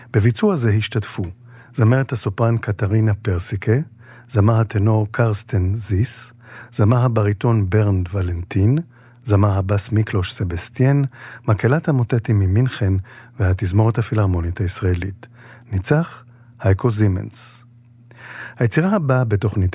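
No technical faults are audible.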